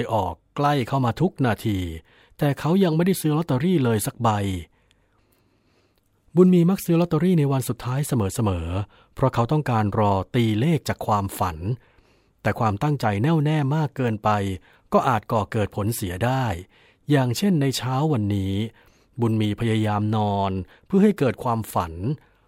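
From start to finish the speech carries a block size mismatch, truncated type. One stage is handing over longer blocks than the next stage takes in, so the tail of every block gets chopped off. Those regular cuts put a steady buzz under everything at about 43.1 Hz, which fits a 1024-sample block. Speed comes through at 1.0x.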